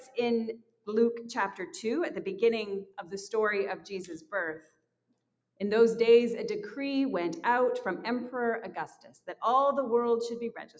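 A noise suppressor built for speech is applied to the music or sounds throughout. It treats steady tones and tails as noise. Level swings by roughly 10 dB. Attacks pass, sustains sink. The result pumps and thins, within a band that stops at 8 kHz.

Sound is cut by the noise suppressor at 0.0–0.18, 0.51–0.88, 2.84–3.13, 3.77–3.92, 4.13–4.33, 4.59–5.6, 8.88–9.34 and 10.59–10.8 s. Held and fading sound drops by about 11 to 21 dB. Decays end early. The longest dip is at 4.59–5.6 s.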